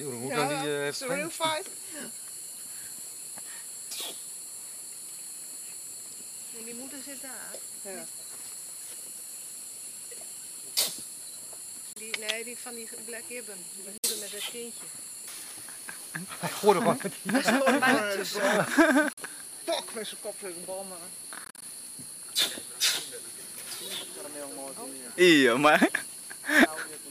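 Bluetooth dropouts cut the sound at 11.93–11.96 s, 13.98–14.04 s, 19.13–19.18 s and, as broken gaps, 21.45–21.62 s, silencing it for 29 to 58 ms at a time, and 101.6 ms in all across the broken gaps, before it resumes further along, likely because wireless packets reached the headphones too late and were discarded.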